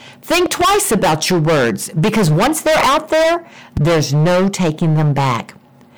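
It's a speech clip with hard clipping all the way through: it's driven about 19 dB past what the stage can pass, so roughly a third of the waveform is flattened into harsh fuzz. There are also loud pops, likely switch or plug transients. There's a double pop from 0.46 to 0.64 s just before "about your words because", and a single one at 3.77 to 3.80 s between "once they're out there" and "no taking". Each jumps roughly 10 dB above the sound.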